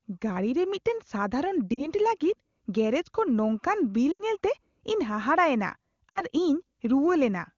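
Lost AMR speech frames at 1.74–1.89 s, 4.12–4.22 s and 6.10–6.22 s. The decoder bridged 40, 80 and 60 ms gaps by repeating its last settings at falling gain, so the sound drops to near silence, then returns rough.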